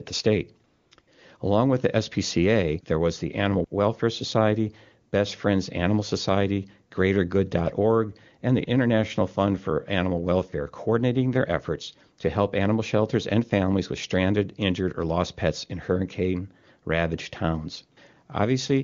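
Right after "the state", the AMR comfort noise switches in three times: 0.67 to 0.91 s, 0.95 to 0.97 s and 1.01 to 1.07 s, lasting 240, 20 and 60 ms. The phone judged the talker silent and stopped sending speech frames, so the receiver substituted smooth synthetic noise for the real background. Unlike a noise gate, the gaps aren't dead silence, and unlike concealed packet loss, nothing buzzy or repeated is heard. Around them the wideband codec sounds clean, consistent with a high AMR-WB rate.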